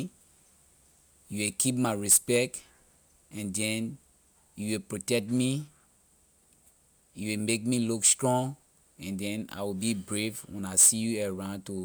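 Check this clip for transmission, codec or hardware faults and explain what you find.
Nothing in the speech recording points to a transmission, codec or hardware problem, as the signal holds steady and continuous throughout with no gaps, distortion or other artefacts to report.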